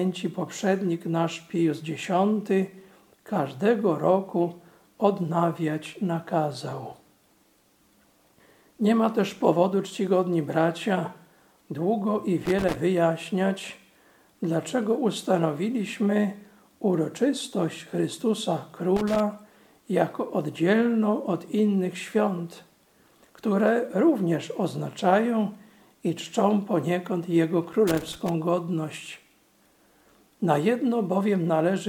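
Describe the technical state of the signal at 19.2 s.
At 19.2 s the signal is just leaving a burst of loose connector crackle that runs from 18.96 to 19.20 s, about a quarter of a second. A worn or dirty contact is making and breaking as it shifts, chopping the audio on and off, so it sounds like an irregular scratchy crackle. On a waveform it shows as ragged gaps and sharp spikes; on a spectrogram, scattered full-height vertical streaks.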